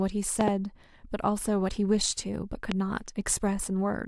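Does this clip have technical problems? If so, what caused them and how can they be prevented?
Yes. Loud pops strike the speech as a double pop at 0.41–0.50 s and a single one at 2.72–2.74 s, roughly 20 dB above the signal. They appear as tall, narrow waveform spikes and thin vertical broadband lines on a spectrogram. The likely cause is a voltage transient from a plug, switch or static discharge. To prevent this, secure connectors and mute the output before switching or plugging anything in.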